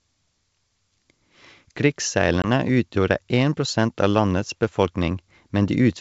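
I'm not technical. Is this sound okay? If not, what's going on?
No. At about 2.42 s there is packet loss on an ADPCM call: a couple of small chunks of the transmitted sound, about 20 milliseconds' worth, never arrived. The receiving end filled the gap with silence and then lost track of how loud and how fast-changing the sound was meant to be. You hear a brief hard-edged hole in the speech, and when it returns around 2.47 s it comes back briefly with a touch of distortion.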